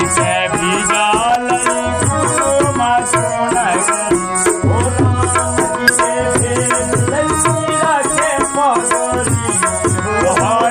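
A worn or dirty contact in the signal path makes and breaks as it shifts, chopping the audio on and off from 1.25 to 1.36 s. That loose connector crackle comes through as a short, irregular burst of scratchy crackle lasting about a tenth of a second.

Damaged data in the compressed stream means the decoder misreads the frames there, loses sync and hunts for the next valid frame header. The result is a brief glitch from 5.88 to 5.90 s that breaks the flow of the sound for a moment.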